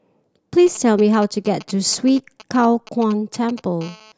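Speech with GSM interference from a nearby 2G handset. From 0.66 s to 3.83 s there are GSM signalling bursts: irregular clusters of ticks and brief buzzes that give a galloping dit-dit-dit rhythm, sitting roughly 20 dB under the speech. The phone is exchanging short control transmissions with the network, and the audio circuitry rectifies each radio burst into an audible click, so the clusters carry the 217 Hz TDMA frame rate inside them. At 3.84 s this turns into a continuous GSM phone buzz that lasts until 4.12 s: a hard, raspy 217 Hz tone with a dense harmonic series, at about 24 dB below the speech and unrelated to it. The steadiness comes from the handset entering a call and transmitting in every frame. The rectified pulse train then repeats without gaps, which produces the unbroken buzz.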